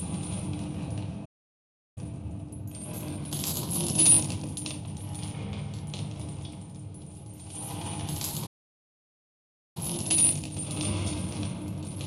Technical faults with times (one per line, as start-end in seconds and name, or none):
1.25-1.98 playback stall
1.98-4.98 time-compressed catch-up
8.46-9.77 playback stall
9.77-12.06 time-compressed catch-up